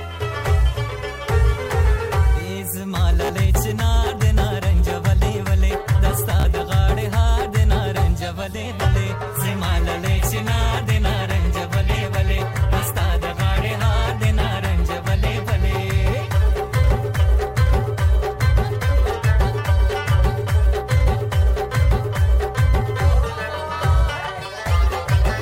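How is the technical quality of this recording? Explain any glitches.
Two short glitches interrupt the recording; both are the same kind of fault. Bluetooth stutter occurs at 3.25 to 3.30 s and again at 6.40 to 6.45 s. Each time, audio data arrived late or not at all, and the receiver kept replaying its last short slice until fresh data came. About 44 ms of sound is lost per event, which fits roughly three dropped packets, so you hear a brief buzzy, machine-gun repetition before the audio jumps ahead.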